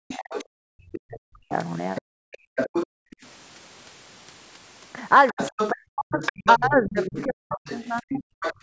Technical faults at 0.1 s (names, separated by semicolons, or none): speech suppressed in double talk; other side's voice leaking through